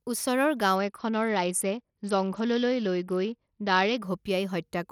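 Speech, with a Bluetooth SBC bit pool drop from 0.76 s to 4.02 s. Over that stretch the treble dulls abruptly and a gritty, grainy noise sits on the sound. The quality then returns at 4.02 s. With too few bits, the upper sub-bands are starved or left empty and the remaining bands are coarsely quantised. The sound fits a fall from a bit pool of 31 to about 8, near 66 kbps. Unlike a plain low-pass filter, it adds roughness as well as dullness, and unlike packet loss there are no gaps or clicks.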